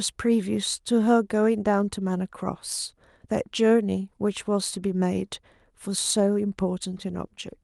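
No technical faults can be heard anywhere in the speech recording, which holds steady from the first moment to the last.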